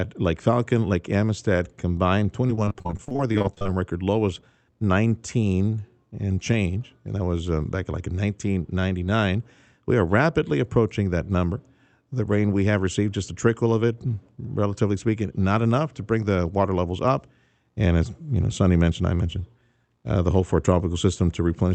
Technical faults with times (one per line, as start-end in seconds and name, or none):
2.47-3.67 repeated packet loss (robotic sound)